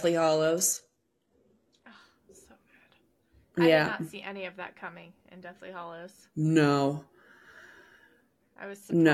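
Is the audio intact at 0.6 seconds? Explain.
No. At 0.6 seconds the speech sounds dull and smeared, with nothing above about 12.4 kHz and a synthetic, swirly quality in the upper range. This is an adaptive stream starting at a low bitrate, from 0 to 2.0 s. The player began on a cheap version of the stream, which fits a 16 kbit/s HE-AAC rendition that rebuilds treble artificially. At 2.0 s it jumps cleanly, with no gap, to a fuller version consistent with 96 kbit/s AAC-LC.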